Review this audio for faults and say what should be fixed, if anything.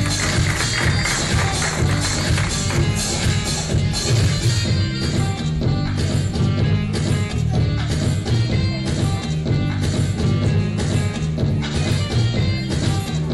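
From 1.6 to 9.6 s there's a low buzz riding on the audio, sitting at 50 Hz and only there while signal is present. That's the resampler restarted on every block: each 20 ms chunk gets converted in isolation, and the pattern points to a 48 kHz to 44.1 kHz conversion. At every block edge the filter is missing its real neighbouring samples, so each boundary leaves a small error, and fifty of those a second fuse into a buzz. Keep one resampler instance running across blocks so its filter history carries over from chunk to chunk.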